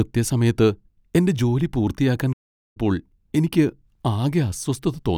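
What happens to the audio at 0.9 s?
Nothing goes wrong at 0.9 s; the speech there plays through intact, with no dropout, click, distortion or other fault.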